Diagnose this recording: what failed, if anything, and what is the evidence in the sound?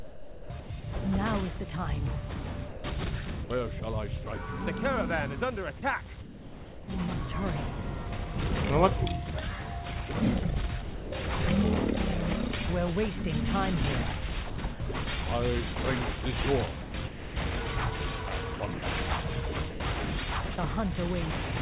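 Call processing: the sender's voice detector likely switched transmission on and off repeatedly. This chopped the sound at 0–0.84, 2.68–4.26, 5.78–6.88, 14.5–14.94, 16.82–17.36, 18.56–18.82 and 19.7–20.58 s, with synthetic comfort noise replacing the sound in between real fragments.

Sound dropped by the voice detector at 10.82–11.12 s: the detector likely mistook the sound for background and stopped sending, so 300 ms gives way to steady comfort noise.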